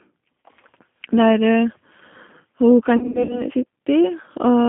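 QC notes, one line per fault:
throughout, G.729 codec: Speech passes through G.729A at 8 kbit/s, rebuilt from a vocal tract filter, pitch predictor and a few pulses per frame, so it sounds plainly rough and synthetic, with the line band confined to roughly 150 Hz to 3.5 kHz.
0.43 s, VoIP packet loss concealed by the speech codec: About 40 ms of audio went missing, which fits two 20 ms packets. The decoder stretched its last pitch and filter with falling gain, giving a brief fading tone or coloured noise instead of the real sound.
2.97–3.44 s, VoIP packet loss concealed by the speech codec: About 180 ms was lost, scattered over 320 ms with runs up to 60 ms, which fits nine packets. Repeated extrapolation turns the sound into a fading tone or coloured noise, and it stays weak or distorted between gaps.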